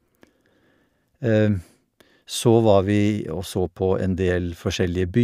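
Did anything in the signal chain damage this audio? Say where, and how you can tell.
No, nothing along the way has left a mark on this speech recording, so there's no stage to point a finger at.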